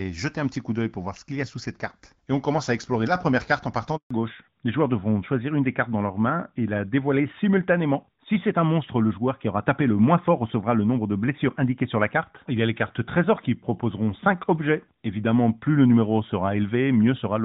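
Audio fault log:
3.97–4.11 s, handover gap: the speech cuts out abruptly and stays silent for about 140 ms before resuming. The call was being passed between networks, and no speech frames arrived while the link changed over, so nothing was decoded for that stretch and whatever was said in it is lost. The fade into silence is quick, within a few tens of milliseconds, and the voice returns once the new path carries audio.
4.11 s to end, fallback to narrowband: from the moment the speech returns, everything above 4 kHz is gone. Before the gap the call ran on AMR-WB (HD Voice) at 12.65 kbit/s, which reproduces speech well past 4 kHz with only light coding damage. After the switch the call is on AMR-NB at 12.2 kbit/s, whose telephone-band limit strips sibilance and airiness. The voice sounds duller, more muffled and somewhat rougher for the rest of the clip.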